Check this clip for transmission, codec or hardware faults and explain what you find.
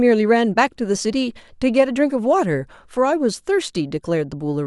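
No fault can be heard anywhere in this speech recording. There is nothing to report at any point in the clip.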